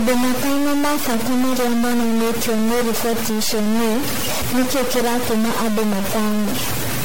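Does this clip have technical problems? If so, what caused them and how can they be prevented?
Yes. Distortion runs the whole clip, with hiss filling the pauses, likely from a stuck bit in the converter or data line. Check cabling and converter hardware before recording.

Generation loss is also present throughout: swirly, hollow, smeared speech with nothing above 16.6 kHz, likely from about seven MP3 re-encodes, which fits 64 kbit/s. Keep edits lossless and encode only once.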